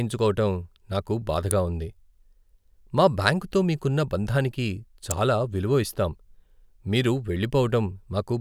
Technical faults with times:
1.51 electrical switching spike
5.11 electrical switching spike

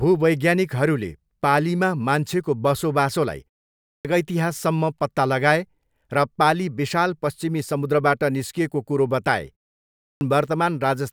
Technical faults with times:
3.89-4.05 clipped start after a pause
10.05-10.21 clipped start after a pause

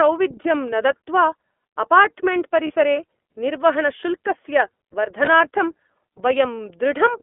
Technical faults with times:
0.00-7.23 iLBC codec
0.42-0.45 lost iLBC frames
2.67-2.71 lost iLBC frames
5.25-5.29 lost iLBC frames

